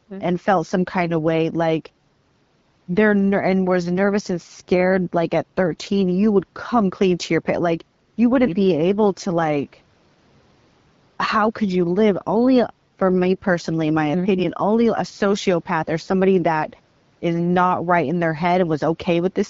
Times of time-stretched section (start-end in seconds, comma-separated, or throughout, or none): none